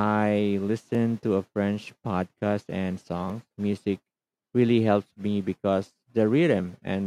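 At 0.95 s and again at 3.3 s, a block of digital silence took the place of the audio, about 0.73 ms long, which fits a 32-sample block. The speech cuts out abruptly and back, heard as a brief tick.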